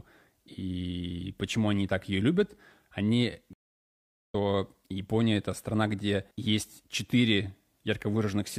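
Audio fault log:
3.53–4.35 s, stream reconnect: The connection dropped and the audio goes silent for about 0.77 s. The player reconnected and started a new decoder mid-stream. The sound resumes roughly 0.7 s further along, so that stretch is skipped. The first moment fades in.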